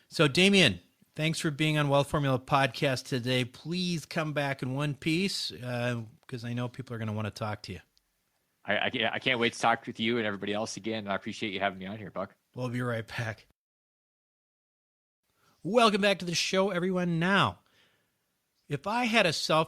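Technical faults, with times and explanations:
0.46 to 0.59 s, microphone overload: The loudest peaks turn harsh and crackly for a brief moment. The tops of the waveform sound flattened, about 2 dB past the converter's limit, on only a tiny share of samples. Input volume set too high is the likely cause.
16.02 s, microphone volume stepped down: The speech and the background both drop in level at once, by about 2 dB, in a single step. There is no fade. The likely cause is call software cutting the microphone's input volume after judging it too loud.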